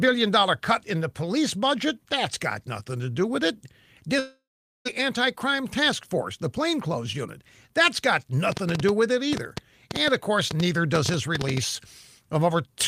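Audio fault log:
4.19–4.87 s, long network dropout: the speech cuts out for about 0.66 s and the missing stretch never comes back. The last bit of sound gets stretched into a buzzy, fading tail, and then for roughly the final 0.44 s there's basically nothing before the audio resumes further along. That pattern likely comes from packets failing to arrive, with the receiver papering over the gap until it runs out of material to repeat.
8.52–11.58 s, train of clicks: a run of around twenty sharp ticks lands over the speech at about 6.9 per second, spaced unevenly rather than like a metronome. They're all much the same shape and jump out well above the speech, peaking somewhere around 15 dB louder. They sit on top of everything, pauses included. That points to something likely injecting pulses from outside the audio itself, such as electrical interference or a faulty connection or power supply.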